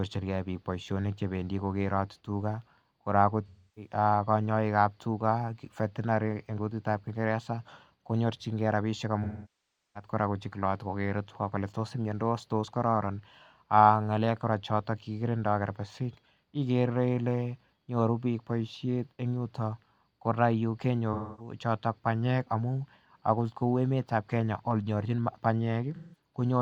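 Speech with AAC frame loss with concealment at 3.47–3.92, 9.23–10.10, 21.13–21.54 and 25.95–26.18 s. The decoder papers over the missing frames with the last good spectrum, so the short gaps come out smeared and noisy. The 0.7 s one at 9.2 s decays toward silence before fading back.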